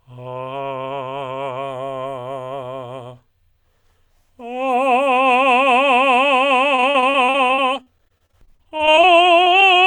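From 6.75 s to 9.07 s the music breaks up with repeated packet loss, giving that robotic sound. Data kept arriving late or not at all, and each hole got patched by extending whatever sound came just before it. There are close to thirty gaps, none longer than 40 ms, and about 27% of that stretch is filler rather than real audio. That's why it goes choppy, with pieces of the music missing.

Right after that come two short concealed packet losses, one at 9.44 to 9.48 s and another at 9.60 to 9.66 s. Each time roughly 20 ms of audio never made it to the decoder in time, so the receiver carried the previous sound forward to cover it and then blended back into the real signal. You hear a quick smear or wobble in the music. The second one also seems to stretch the timing by a few milliseconds.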